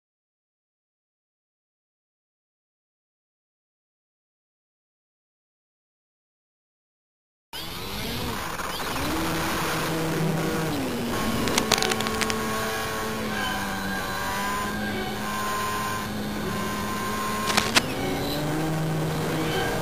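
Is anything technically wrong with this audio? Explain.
Yes. Cable scratch noise appears twice, from 11.4 to 12.32 s and from 17.46 to 17.79 s, likely caused by a worn cable, connector or control shifting under movement. Its contact resistance flickers, injecting ragged bursts of scratching and rustling, roughly as loud as the sound in the first event and louder than it in the second.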